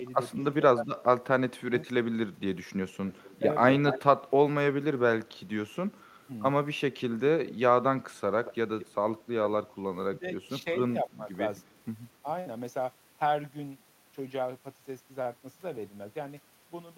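Speech with two recurring call-path faults. Speech suppressed in double talk appears from 0.0 to 1.73 s, 6.1 to 6.25 s and 9.38 to 12.25 s, where the voice dips or drops out in pieces while the far side is talking. The deepest drop is about 25 dB, at 6.1 s, and under half a second to roughly three quarters of a second of the voice is lost in each longer stretch. This is likely an echo canceller that could not tell the near talker from loudspeaker echo and attenuated both. It is a loss of the wanted voice, with nothing added. Echo leak is the reverse: an extra, delayed copy of the voice arrives about a quarter of a second late, at roughly 230 to 260 ms. It is clearest from 2.95 to 4.28 s, at about 10 dB below the speech, weaker from 7.49 to 8.95 s, at about 20 dB down, and barely present at 5.28 to 6.05 s and in a brief scrap at 11.6 s. The likely cause is a far end on a loudspeaker whose canceller let some of its microphone pickup back down the line.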